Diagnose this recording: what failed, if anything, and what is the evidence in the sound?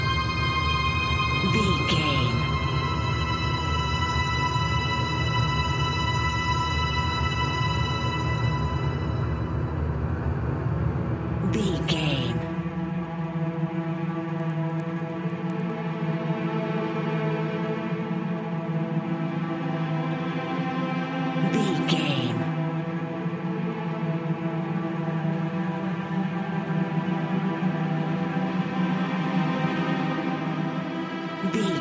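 Resampler restarted on every block, at the sample-rate conversion stage: from 14.3 to 15.8 s, regular 10 Hz ticks mark 100 ms block edges where each block's 44.1 kHz to 16 kHz conversion lacks its neighbours' samples.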